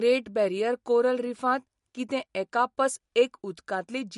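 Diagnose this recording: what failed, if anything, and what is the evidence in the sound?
MP3 compression, throughout the speech: the audio is likely damaged at the codec stage. Nothing reaches above 11.2 kHz, and the sibilants sound watery and swirly. With too few bits, the encoder cut the treble and zeroed weak spectral lines, which fits a low bitrate around 48 kbps.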